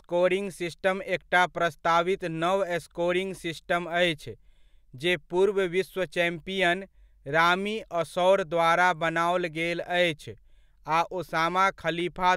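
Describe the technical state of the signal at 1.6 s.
At 1.6 s the signal is intact, with no audible fault at that moment.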